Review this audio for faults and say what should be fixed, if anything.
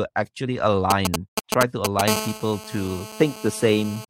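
GSM signalling bursts, 0.91 to 2.01 s: a nearby 2G phone sends short groups of radio bursts while signalling, and the audio circuit rectifies them into a galloping pattern of ticks and brief 217 Hz buzzes, roughly as loud as the speech. Keep phones well away from microphones, cables and preamps.

GSM phone buzz, 2.08 to 4.05 s: the phone is now in a call and transmits continuously at 217 bursts per second, so the rectified pulses become a steady, raspy 217 Hz buzz full of harmonics, about 10 dB below the speech. Switch nearby phones to flight mode during recording.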